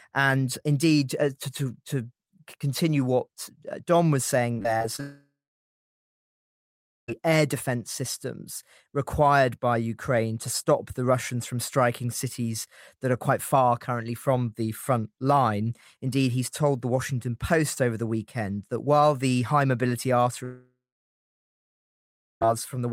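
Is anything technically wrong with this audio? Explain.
Yes, there are two kinds of fault. From 4.53 to 5.00 s there's repeated packet loss (robotic sound): six short holes, the longest 25 ms, get patched by repeating the last sound, so about a quarter of that stretch turns choppy. Right after, from 5.00 to 7.10 s, and again from 20.44 to 22.47 s, the sound trails off into a fading buzz or hiss and then sits silent for well over a second before returning with that stretch missing. That's likely a long network dropout.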